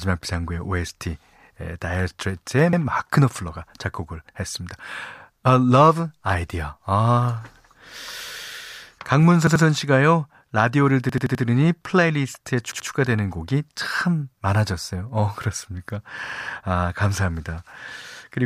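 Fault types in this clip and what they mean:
Repeated buffer: fresh audio arrived late, so the last 85 ms chunk, which fits a 4096-sample buffer, played again. Five stutters in the speech repeat one piece two to five times with hard joins. Unlike a dropout, nothing goes silent or missing.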